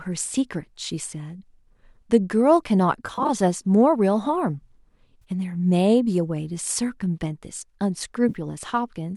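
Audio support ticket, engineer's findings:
AAC frame loss with concealment: decoder lost frames on the low-delay AAC path and refilled them from the last good spectrum. Smeared, phasey dropouts at 3.07–3.30 s (about 120 ms lost, scattered, runs up to roughly 30 ms), 5.22–5.24 s (20 ms) and 8.29–8.36 s (40 ms), consistent with 10 ms frames.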